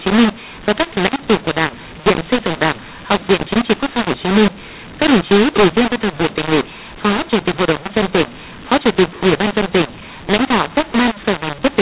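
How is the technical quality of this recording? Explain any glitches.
The quality is poor, because of a single fault present from start to finish. Throughout, mu-law and A-law are mixed up: mu-law-coded telephone speech is being decoded as A-law, scrambling sample levels. It sounds harsh and gritty, with pauses filled by hiss. The waveform shows a noise floor lifted well above zero, and the spectrogram shows broadband grain smeared across the band, which is capped near 4 kHz by the G.711 telephone coding, pointing to an 8 kHz sample rate.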